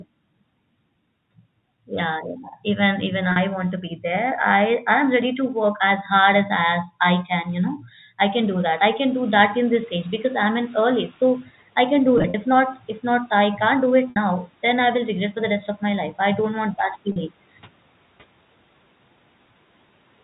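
At 3.32 s, just before "want to be", packet loss with pitch repetition removes about 40 ms of audio, which fits two 20 ms packets. The receiver bridges the gap by repeating the last pitch period, so the sound briefly holds on a slightly buzzy, sustained tone before normal audio resumes at 3.36 s.

From 8.33 s to 11.46 s the noise suppressor is catching up. Shortly after 8 s the room noise jumps by roughly 20 dB. The suppressor's noise estimate still reflects the quieter background, so the louder noise passes with little reduction at first. Over about 3.1 s the estimate adapts and the noise sinks by about 9 dB, settling just before "I can do".

Right after "I can do", between 12.18 s and 12.34 s, packet loss recurs as scattered gaps totalling 80 ms across 160 ms, with no single run longer than 40 ms. This sounds like a short cluster of held, buzzy stutters. At 14.10 s a 60 ms loss outlasts the roughly 50 ms fade of the repeated period, so the buzz thins toward silence before audio returns at 14.16 s with a short cross-fade. 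At 17.12 s another 40 ms loss gives one more brief held buzz, ending at 17.16 s.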